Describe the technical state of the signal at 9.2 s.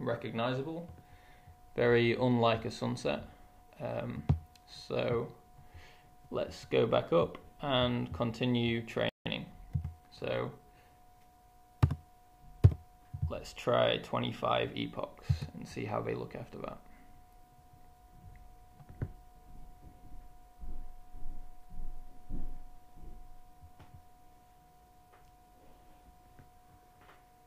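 At 9.2 s the output is in a playback stall: the audio cuts out at 9.09 s and stays silent until 9.26 s, a gap of about 165 ms, then resumes. The likely cause is the player running short of buffered data or its output thread being held up, so nothing reached the output until it recovered. The sound stops in mid-flow rather than fading, which makes the break clearly audible.

Directly after the gap, from 9.26 s to 10.90 s, there is time-compressed catch-up at about 1.1x speed. The player is working off the backlog left by the stall, dropping small slices of audio and cross-fading across the joins. Over that 1.64 s stretch the sound runs hurried while its pitch stays normal, until playback returns to its regular rate.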